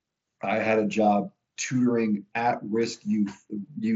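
A short speech recording with no technical faults. It has passed through the Bluetooth mSBC headset codec, which holds the speech to a band topping out around 8 kHz and adds a light grain on the louder syllables.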